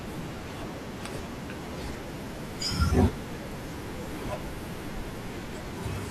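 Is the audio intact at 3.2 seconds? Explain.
Yes, the audio is intact at 3.2 seconds, with no fault present at that moment.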